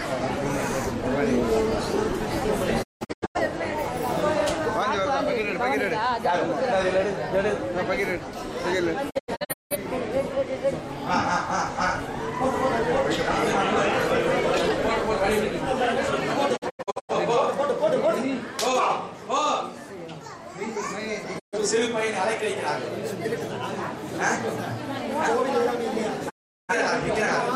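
Digital broadcast dropouts at 2.82, 9.09, 16.56, 21.38 and 26.28 s: the receiver mutes, with 20 ms fades, after bad frames, losing 128 to 384 ms each time. The first three are broken into several short holes.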